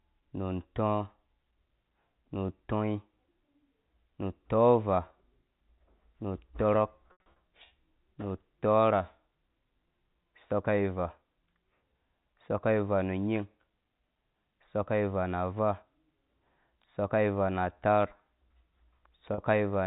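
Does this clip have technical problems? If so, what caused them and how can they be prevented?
Yes. Packet loss with pitch repetition at 7.08 to 7.36 s (180 ms lost across 280 ms, longest gap 80 ms) and 19.34 to 19.38 s (40 ms): the receiver repeats the last pitch period, giving brief buzzy held tones. Prevent it with forward error correction, a larger jitter buffer, or a less congested network path.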